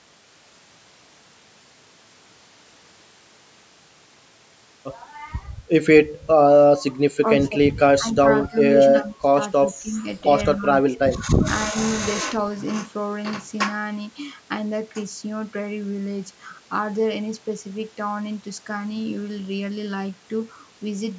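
Speech with speech suppressed in double talk: the voice repeatedly ducks and chops at 7.2, 7.98, 8.49, 8.92, 9.72, 10.57, 10.98 and 11.69 s, dipping by about 5 to 25 dB, deepest near 9 s. This is likely an echo canceller pulling down the near talker while the far side speaks. Unlike packet loss, the level sinks and recovers, and the gaps follow overlapping talk within a call band topping out at 8 kHz.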